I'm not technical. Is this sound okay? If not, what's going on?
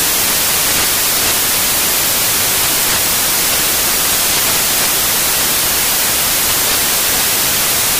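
No. From start to finish it's loud hiss, because the samples are built from the wrong bytes: the player reads each value scrambled, so noise swamps everything.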